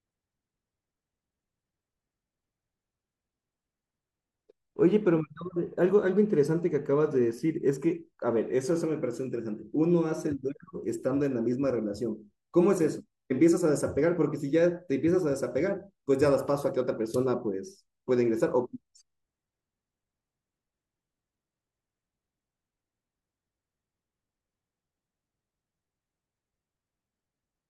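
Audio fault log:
Nothing to log here: I listened all the way through this speech recording and didn't hear any fault at all.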